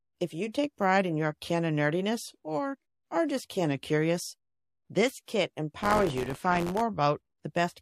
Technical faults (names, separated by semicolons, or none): pre-echo; buffer tearing